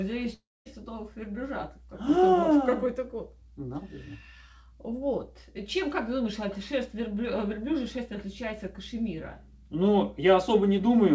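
From 0.34 to 0.67 s the sound smears into a fading buzz, goes silent, then resumes with about 320 ms gone, likely a long network dropout.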